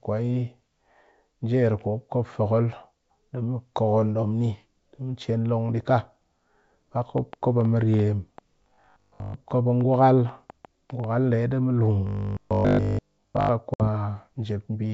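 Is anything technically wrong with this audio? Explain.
Yes. There are three distinct faults in this speech.

From 7.18 to 11.05 s a train of clicks runs over the speech and through its pauses. There are about twenty sharp pops, roughly 5 per second, at an uneven pace, each peaking about 5 dB above the speech. The repeated, similar-shaped pulses point to a likely cause in outside interference or a struggling interface. Unlike codec or dropout damage, the clicks sit on top of intact audio rather than replacing any of it.

Robotic sound from repeated short buffers occurs at 8.62 to 9.36 s, overlapping the clicks, and again from 12.07 to 13.49 s, right after "di mu lun". In both stretches the speech becomes a rigid, metallic drone locked at 50 Hz. That fits 20 ms slices being replayed when new audio arrived too late, likely an underrunning buffer, with real audio skipped meanwhile. In the first stretch most of the audio is repeated, and in the second all of it is. 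The fixed buzz pitch that ignores intonation is what separates this from clicks or a plain gap.

Packet loss on an ADPCM call strikes at 13.74 s. A sharp-edged silence of 60 ms, about a few packets' worth, is followed by speech that comes back slightly distorted. It recovers by 13.88 s. The decoder's predictor and step size had drifted from the sender's and needed that time to resynchronise. This lag after the hole distinguishes it from a simple mute. The surrounding G.722 coding at 64 kbit/s keeps its clear wideband character.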